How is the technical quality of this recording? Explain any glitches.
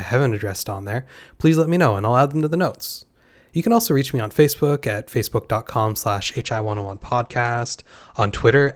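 A call bitrate drop degrades the last part of the recording, from 6.22 s to the end. The call's bandwidth estimate fell, forcing the encoder onto far fewer bits, which fits a cut from roughly 40 to 11 kbps. Coarser coding and an audio bandwidth narrowed from 20 kHz to 8 kHz leave the speech rough and muffled.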